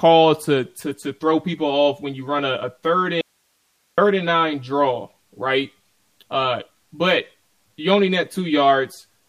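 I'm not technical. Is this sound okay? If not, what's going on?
No, there are two problems. From 0.84 s to the end, the speech sounds hollow and a bit phasey. That's channel delay causing comb filtering: one side runs about 10 ms behind the other, and when the two are combined, parts of the sound cancel out.

Then from 3.21 s to 3.98 s, the speech cuts out abruptly for about three-quarters of a second, leaving only faint hiss. That's an audio dropout to a faint residue, likely the signal being lost for a moment while the rest of the recording chain stayed switched on.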